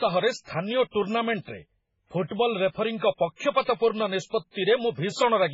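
Heavy MP3 compression, likely at a very low bitrate around 16 kbps, starved the encoder of bits throughout the speech, so it cut everything above 7.6 kHz and dropped weak frequency lines frame by frame, leaving a dull, watery, swirling sound with smeared consonant attacks.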